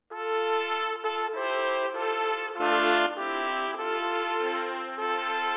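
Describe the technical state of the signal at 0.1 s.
At 0.1 s the signal is intact, passing through the call path normally with the narrow telephone band that leaves nothing above 4 kHz.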